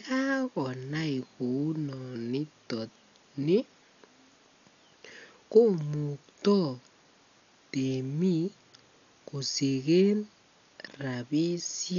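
All the way through, the speech sounds dull with nothing above 7 kHz, plus rough, fluttering noise around tones, likely heavy Dolby Digital compression at roughly 48 kbps.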